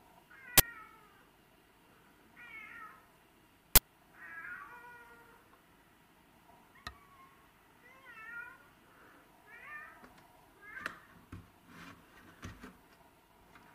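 At 0.58 to 0.60 s, a short, loud burst of digital noise cuts in. It returns at 3.76 to 3.78 s. Both are uninitialised buffer faults. Each burst lasts about 21 ms, which fits a 1024-sample buffer. A block was sent for playback before any audio had been written into it. Whatever stale data sat in that memory was then played out as if it were sound.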